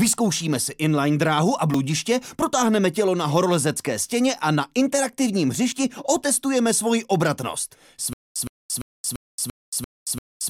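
From 8.13 s to the end, a stutter with silent gaps: a 116 ms burst repeats seven times every 342 ms with 226 ms of silence, likely a stalled stream replaying its last buffer.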